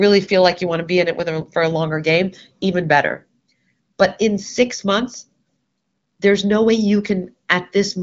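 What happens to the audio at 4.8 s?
Nothing goes wrong at 4.8 s: the speech there comes through intact, carried by the AMR wideband (HD Voice) codec at a rate high enough to keep it clear, with nothing above about 7.5 kHz, as that codec's upper limit dictates.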